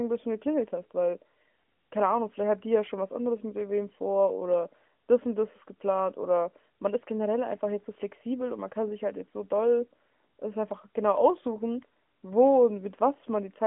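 No faults can be heard at any point in the speech.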